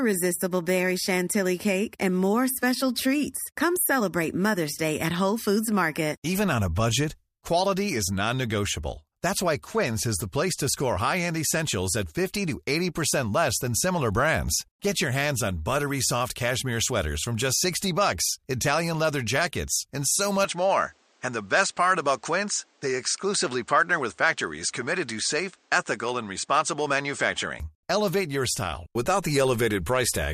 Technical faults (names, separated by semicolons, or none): input switched to a poorer device